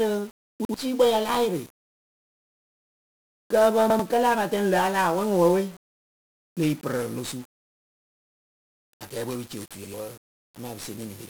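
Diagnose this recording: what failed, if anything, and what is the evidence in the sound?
The codec stage failed throughout: 1-bit DFPWM compression. Dense broadband hiss and a fuzzy, crackly grain coat the speech, burying the treble, consistent with a rate near 48 kbps. Unlike the swirling artefacts of perceptual codecs, this noise is steady and follows the signal.

The driver or buffer stage produced a repeated buffer at 0.65 s (just before "ya la yɩrɩ"), 3.90 s (between "kǝ pǝ" and "kǝlɨ apatɛŋ la a") and 9.85 s (after "pɨ ci"). Each time, a piece about 93 ms long plays twice with a hard join, which fits a 4096-sample buffer being replayed. Roughly a tenth of a second of audio is skipped. A dropout would leave silence, but here identical sound repeats.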